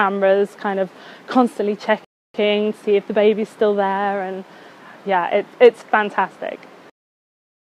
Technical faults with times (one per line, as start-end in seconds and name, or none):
2.05-2.34 rebuffering stall